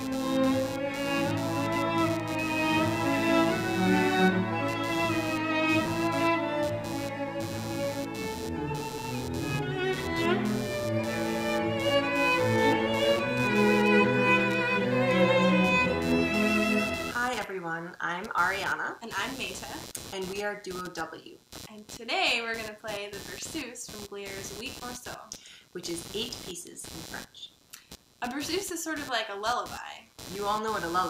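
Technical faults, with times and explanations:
Throughout, computer activity noise: a buzzy, chirping layer pulsing at around 150 Hz sits roughly 15 dB below the wanted sound, rising and falling with the computer's workload rather than with the audio itself. Processor, graphics or mouse load shifts the ground shared with the audio circuit, and that disturbance leaks in. On a spectrogram it shows as a comb of harmonics spaced about 150 Hz apart, flickering on and off. The waveform carries a fine, irregular ripple.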